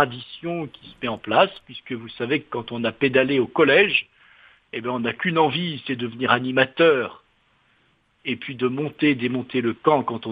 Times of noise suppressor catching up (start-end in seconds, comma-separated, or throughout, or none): none